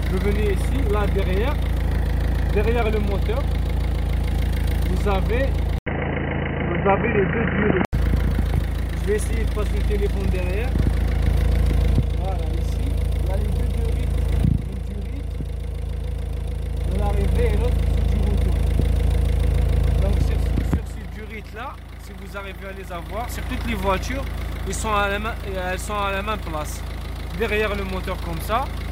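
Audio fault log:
5.78 to 7.93 s, input switched to a poorer device: an 80 ms silence, then dull, boxy sound with nothing above 3 kHz and a faint new noise floor at unchanged level, likely a narrower-band input taking over. Waveform: a flat gap. Spectrogram: an empty upper band.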